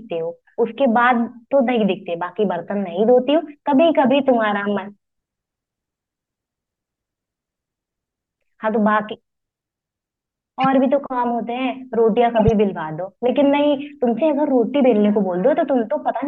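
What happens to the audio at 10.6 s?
A corrupt frame was decoded here: bits inside a few consecutive compressed frames were flipped in transit or storage, and the decoder played them rather than concealing them. From 10.61 to 10.66 s, about 54 ms, misread gains and spectral codes push energy into the wrong frequencies. The speech is briefly replaced by a sharp chirp or burst of noise that peaks at around -10 dBFS.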